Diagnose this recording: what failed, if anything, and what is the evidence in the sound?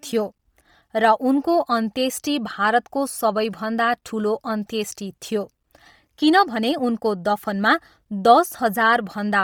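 Codec stage: heavy compression, likely Bluetooth LC3 at a bitrate near 32 kbps, coarsens the speech throughout, leaving a breathy, grainy, noise-filled upper band.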